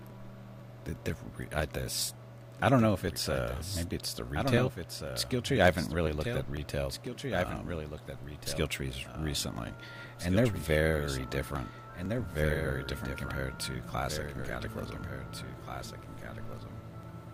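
A quieter second copy of the sound trails the original by roughly two seconds for the whole clip, sitting about 10 dB below it. It is a clean, full-band repeat with no reverb tail or room colour, so everything arrives twice. This is a doubled audio track, most likely the same signal captured a second time through a slower path, or an edit leaving two copies out of step and mixed together.

From 0.1 s to 17.03 s a steady tick or small pop recurs every 0.498 s, around forty times in all. The ticks are heard only where there is signal underneath them. Each one is a gap of roughly 2 ms in which the audio is skipped rather than replaced with silence, so the waveform jumps and clicks. The strict regularity points to periodic USB or driver dropouts, where a background task stalls the bus or audio driver at a fixed interval and a sliver of audio is lost each time.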